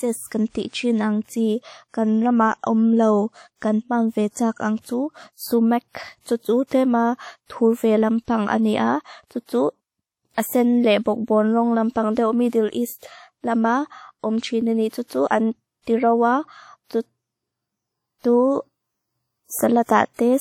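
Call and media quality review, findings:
WMA compression, throughout: ringing, washy texture with hiss that swells and fades with the speech, nothing above 19.1 kHz. Likely a WMA 1 transform encoder at a rate that fits 48 kbps, quantisation noise smeared across long blocks, weak components dropped.

Pre-echo, 19.85 to 19.89 s: brief hiss arriving about 42 ms ahead of an onset, attack softened. Transform block spreads noise sized for the loud attack into the quiet lead-in before it.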